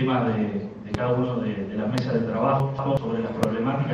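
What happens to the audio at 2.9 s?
At 2.9 s the audio sits inside a chunks out of order fault running from 2.60 to 2.97 s. One block of roughly 186 ms was delivered one position late, so it plays after the block that should have followed it, and the two swap places. Nothing is missing, but the sequence is scrambled, leaving three abrupt joins where unrelated waveforms meet. The result is a brief jumbled, garbled moment.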